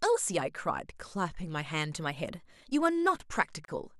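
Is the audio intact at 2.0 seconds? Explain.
No. A drift correction step runs from 1.97 to 3.22 s: the speech plays 5.36% faster and about 90 cents higher, nearly a semitone, then snaps back. It is likely clock-matching software abruptly raising the playback rate to drain its buffer.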